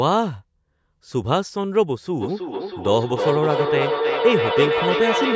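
At 2.17 s a feedback howl begins and runs to the end of the clip: the room loop gains on every pass, so repeats roughly every 300 ms swell into a tone near 500 Hz, peaking about 2 dB below the speech. Unlike echo, it grows rather than fades.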